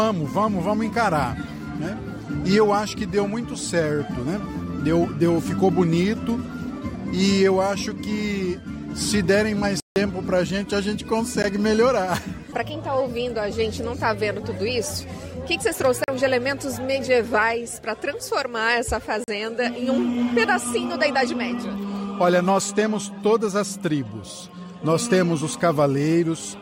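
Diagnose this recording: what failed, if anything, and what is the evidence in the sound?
The driver or buffer stage dropped output, leaving blocks of digital silence: a 160 ms hole at 9.80–9.96 s, a tick at 11.43 s, and 40 ms gaps at 16.04 and 19.24 s. Each cuts out and back without a fade.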